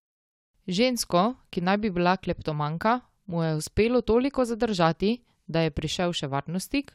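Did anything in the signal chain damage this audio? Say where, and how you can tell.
No, nothing in the chain damaged this speech.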